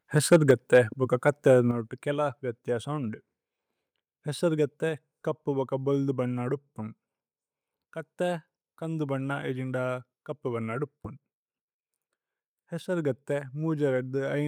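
A speech recording whose microphone input runs too hot at the start. Microphone overload from 0.17 to 0.78 s drives peaks about 6 dB past the converter's limit, flattening a few percent of samples and putting a harsh crackle on the loudest syllables, likely from input volume set too high for the converter. A second brief overload at 1.27 to 1.29 s exceeds the limit by about 1 dB and clips a small fraction of samples. The microphone volume is stepped down at 0.51 s, dropping level by about 3 dB in one jump while the first overload is still sounding, and again at 1.71 s by about 7 dB, just before "കേല വ്യഥ്യ സോഉന്ദു". Voice and background fall together each time, most likely because the call software's automatic gain control reacted to the clipping and cut the device's input volume.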